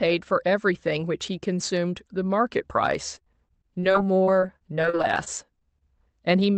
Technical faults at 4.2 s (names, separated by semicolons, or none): repeated packet loss (robotic sound)